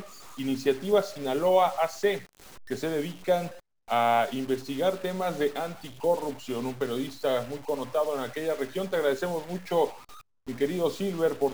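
From start to finish, the sound carries a grainy noise. It fits a stuck bit, likely a data line or converter bit held fixed. Affected samples shift by a step of around -45 dBFS. Quiet gaps fill with a steady hiss.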